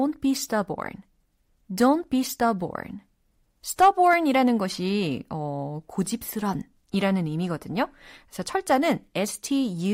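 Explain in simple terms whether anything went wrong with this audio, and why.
Hard clipping occurs at 1.82 to 1.91 s, just before "be stubborn", and at 3.81 to 4.14 s, just before "것이 어 고집스런 이라는". The speech was too loud for the recording to hold, so its loudest peaks were chopped flat, adding a brief harsh crackle.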